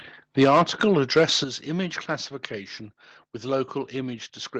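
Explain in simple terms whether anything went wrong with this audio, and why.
At 1.44 s, just before "image classification with", everything suddenly drops in loudness: a microphone volume stepped down, likely the call software turning the mic input lower.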